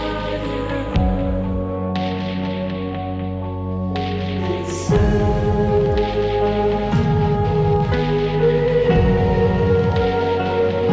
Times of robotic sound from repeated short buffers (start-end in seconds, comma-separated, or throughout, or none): none